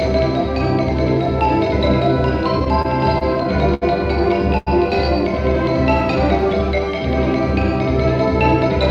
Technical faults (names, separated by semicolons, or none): repeated stalls (stutter); short stall from a late packet